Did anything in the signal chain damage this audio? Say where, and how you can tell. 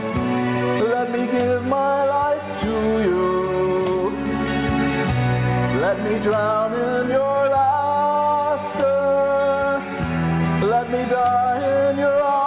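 No, nothing in this audio stood out as damage from any stage of the signal chain on listening.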